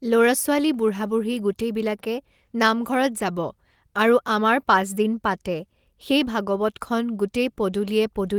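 No technical faults can be heard in the speech, which carries content up to 20.2 kHz with only the light coding texture of Opus voice compression in its hybrid mode, at a rate that points to around 24 kbps.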